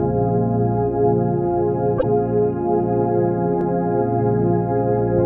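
From 1.97 to 2.04 s, a gap in the stream most likely broke the MP3 bit reservoir: frames after the cut reached back for borrowed data and decoded bytes from the wrong frame. The audio jumps ahead, with a garbled disturbance lasting about 70 ms, roughly three 26 ms frames.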